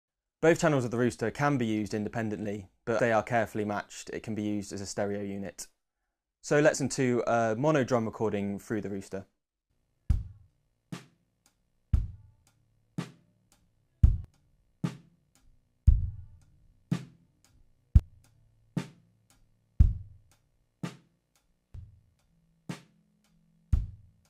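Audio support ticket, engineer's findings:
Skips at 2.99, 6.75, 10.50, 14.25, 17.99, 21.74 s, each about a third of a second lost with no gap: likely audio missing between chunks in 4 s blocks. Strictly periodic, unlike random dropouts.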